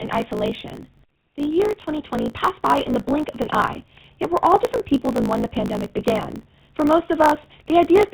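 From the first moment to the end, the speech passes through the GSM full-rate codec, with plainly audible damage consistent with a 13 kbps stream. The excitation is rebuilt from sparse, regular pulses, giving a buzzy, gravelly roughness. A spectrogram shows a hard ceiling at 4 kHz.

Across the whole clip there is also a block size mismatch (truncated). Each block, which fits a 1024-sample write size, loses its tail before the next stage reads it. That leaves a 54.4 Hz buzz and speech running 1.16 times fast at near-normal pitch. The waveform shows jumps about every 18 ms, and the spectrogram shows matching thin vertical stripes.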